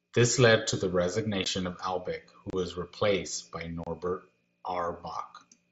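At 1.44 s, just after "led to the", there is unconcealed Bluetooth headset packet loss. A 15 ms hole cuts the speech with hard edges. At 2.50 to 2.53 s, just before "was replaced by", a 30 ms gap opens. At 3.84 to 3.87 s, after "who was replaced by", another 30 ms gap follows. The headset link dropped voice packets, and nothing filled the holes. The lengths suggest two and four lost packets. Each gap is a brief, abrupt dropout in the wideband mSBC audio.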